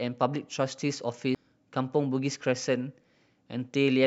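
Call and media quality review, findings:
CD skip at 1.35 s in the speech: tick with a few milliseconds of mute, then the audio resumes from a different point. Probable component: disc transport or optical pickup. Mechanism: a knock or disc flaw threw the laser onto another turn of the spiral track. The player muted briefly and continued playback from there, displaced by a whole number of disc revolutions.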